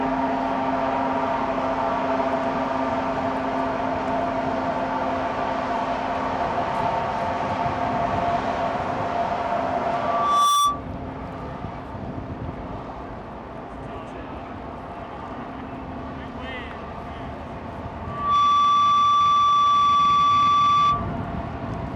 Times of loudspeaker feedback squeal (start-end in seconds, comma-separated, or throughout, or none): 9.91-10.83, 18.03-21.14